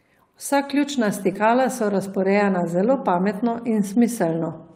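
From 1.33 to 1.37 s there is a short concealed packet loss. 20 ms of speech arrived too late to decode, and the receiver filled 14 ms of it by extending the preceding sound before blending back into the real signal. The result is a brief smeared continuation.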